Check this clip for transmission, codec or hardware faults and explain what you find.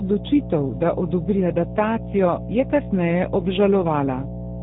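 Two faults run through the whole clip: mains hum and G.729 codec damage.

Mains hum is present from start to finish. It is a steady 60 Hz tone with low harmonics. A ground loop or nearby transformer is leaking the power line into the signal. The hum is loud, nearly as strong as the speech itself.

G.729 codec damage is also continuous and plainly audible. The codec rebuilds speech from a vocal tract model, pitch prediction and sparse pulses. Nothing above 3.8 kHz survives, which fits an 8 kbit/s G.729 stream. Speech sounds muffled, rough and synthetic.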